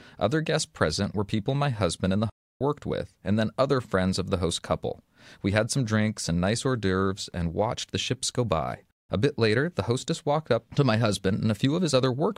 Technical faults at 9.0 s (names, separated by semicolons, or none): playback stall